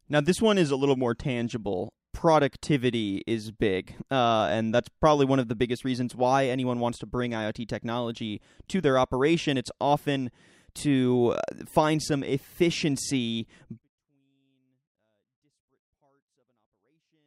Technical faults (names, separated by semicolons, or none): 24-bit alignment error (too quiet)